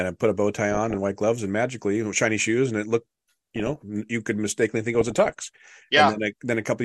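DAB burbling occurs three times in this speech: 0.72 to 0.97 s, between "put a bow tie" and "white gloves and magically"; 3.56 to 3.82 s, between "shoes and it looked" and "you could mistakenly think"; and a longer stretch from 4.95 to 5.92 s. Weak reception lets bit errors slip past error correction into the MP2 data, so corrupted samples put short blips of noise in single sub-bands and corrupted scale factors make sub-bands jump in level for up to a frame. The result is a burbling over the speech, consistent with an error rate of a few tenths of a percent.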